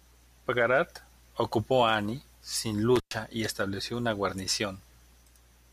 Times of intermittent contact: 2.96-3.15

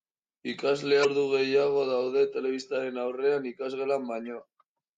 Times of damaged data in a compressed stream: 1.01-1.05, 4.26

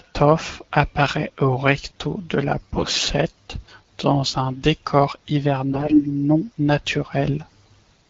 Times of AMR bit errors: 2.74-3.09, 5.72-6.04

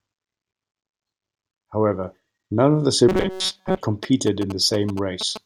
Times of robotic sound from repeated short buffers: 3.09-3.83

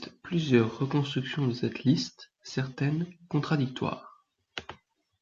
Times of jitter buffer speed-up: none

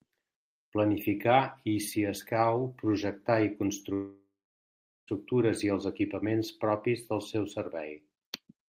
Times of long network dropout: 3.93-5.09

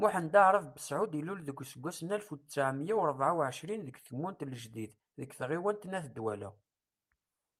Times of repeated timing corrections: 0.11-7.44

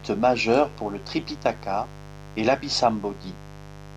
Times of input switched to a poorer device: none

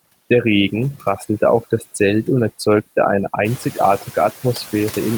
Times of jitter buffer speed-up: none

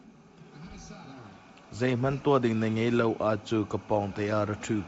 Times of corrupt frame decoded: none

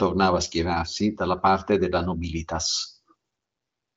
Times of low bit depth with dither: none

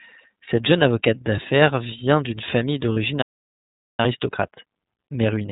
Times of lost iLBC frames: 0.45-0.49, 2.93-2.97

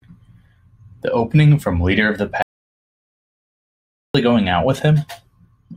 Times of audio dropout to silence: 2.42-4.14

